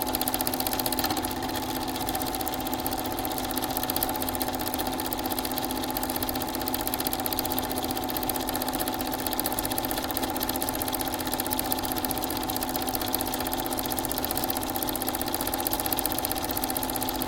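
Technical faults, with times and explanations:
No technical faults detected.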